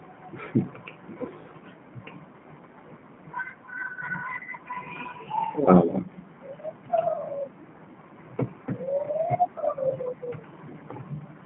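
Throughout, the speech sounds thin, slightly rough and synthetic, confined to a 150 Hz to 3.4 kHz band. That is plainly audible G.729 codec damage: each 10 ms frame is rebuilt from a vocal tract filter, a pitch predictor and a few pulses, which fits an 8 kbit/s G.729A stream.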